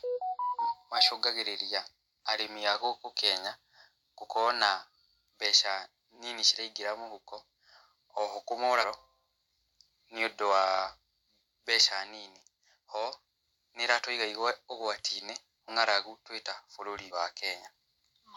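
Speech, with compressed frames skipped at 8.80–8.85 s, 15.68–15.70 s and 17.07–17.11 s. The audio jumps ahead, by about half a second, then a fifth, then a tenth, consistent with whole 46.4 ms frames lost or rejected.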